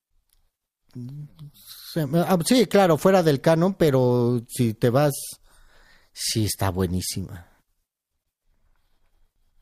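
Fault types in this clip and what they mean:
Compressed frames skipped: at 9.36 s, near the end of the speech, the audio jumps ahead by about a tenth of a second, which fits one missing or rejected 92.9 ms frame.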